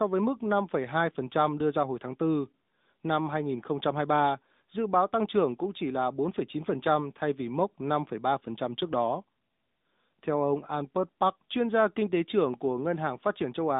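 AMR narrowband mobile codec damage runs through the whole clip. The speech has been carried through the 2G/3G phone codec, which samples at 8 kHz and rebuilds the voice from a vocal tract model excited by a pitch predictor and a handful of pulses per 5 ms block. Nothing survives above about 3.8 kHz, and the usable band sits roughly between 200 Hz and 3.7 kHz. The synthetic coding character is plainly audible, which fits the 10.2 kbps mode.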